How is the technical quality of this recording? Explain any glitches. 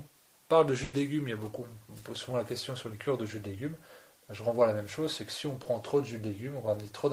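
The recording has two network-related glitches, both from audio that never reached the decoder in time.

At 0.83 to 0.95 s there is a burst of packet loss. The sound freezes into a held sound that fades and then jumps ahead. Several consecutive packets were lost or arrived too late. The receiver stretched the last sound across about 100 ms, turning it down as the gap went on, and then resumed with that stretch of audio missing.

At 5.63 to 5.67 s there is a short concealed packet loss. It is heard as a brief smear or wobble. About 20 ms of audio failed to arrive in time. The decoder filled the hole by continuing the preceding sound and then blended back into the real signal.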